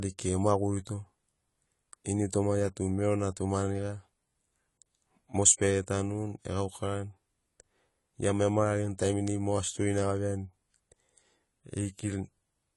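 From start to finish the speech carries AAC compression damage, plainly audible, most likely from AAC-LC at a low rate, which fits roughly 32 kbps. Nothing survives above 11.5 kHz, so the sound is dull, and sibilants turn fizzy and smeared as the coder coarsely quantises its frequency lines. A spectrogram shows a hard ceiling at 11.5 kHz and patchy holes in the upper bands, shifting from frame to frame.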